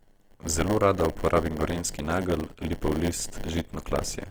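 Speech runs throughout with a steady 100 Hz buzz and a drawn-out pace, the signature of a block size mismatch (padded). Each block reaches the next stage short and is topped up with silence, so tiny gaps repeat 100 times a second and the audio plays at 0.919 of its proper speed. Unlike a sample-rate error, the timbre stays where it should. On top of this, the speech sounds rough and grainy, with band content still present up to about 20.2 kHz rather than left with the swirling holes MP3 produces. That points to Opus compression in its CELT music mode, likely at a low bitrate near 24 kbps, with the damage plainly audible.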